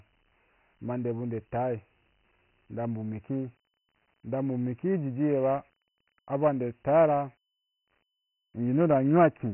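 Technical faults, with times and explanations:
Throughout: Dialogic VOX ADPCM. The speech has passed through OKI-style 4-bit adaptive differential coding at about 24 kbps, which fits a 6,000-sample-per-second rate, so nothing survives above 3.1 kHz and the audio sounds narrow and boxy. Each sample stores only a coarse step from a prediction, and the step size adapts slowly, so heavy quantisation error rides along as a gritty hiss that swells with the speech.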